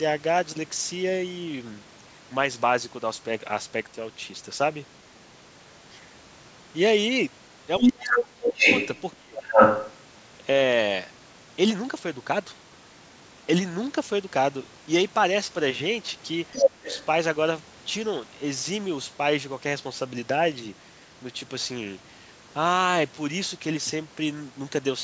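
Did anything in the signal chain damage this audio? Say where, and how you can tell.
Yes. Speech is suppressed in double talk at 7.8–8.65, 9.15–9.42 and 16.79–16.92 s, dropping as much as about 30 dB. The likely cause is the call's echo canceller ducking both talkers.

The other side's voice leaks through at 7.81–9.16, 9.4–10.0, 16.52–16.71 and 16.89–17.05 s, at levels from about 15 dB below to 10 dB above the speech. It is likely loudspeaker echo that the canceller left in.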